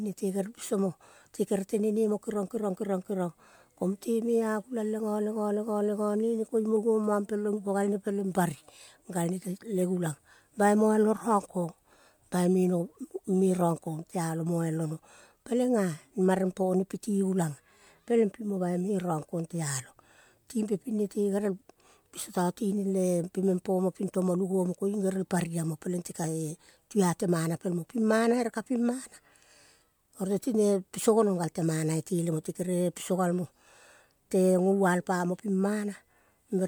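Speech recording with no technical faults to report.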